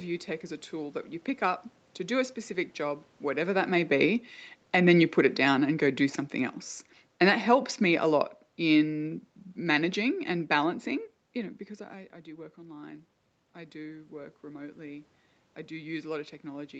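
Automatic gain falling at 3.26 to 6.61 s, just after "do a specific job", and again from 7.13 to 10.85 s, ending before "you know because I": each time the gain control judged the input too loud or its background noise too strong and eased its gain down by about 5 dB, so the speech and the room noise behind it sink together over several seconds.

Automatic gain rising from 12.24 to 15.05 s, after "know because I I" and before "I do": the talker moved away shortly before, dropping the input by about 13 dB, and the control slowly raised its gain by about 5 dB, so voice and background swell together.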